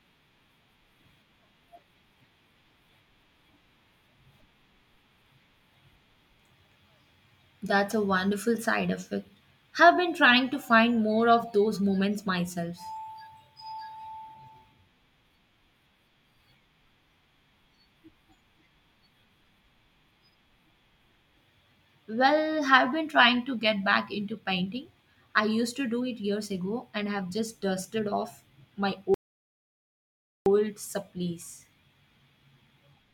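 Rebuffering stall at 29.14 s, after "just dusted off my": the player ran dry, inserting 1.32 s of silence before resuming exactly where it stopped.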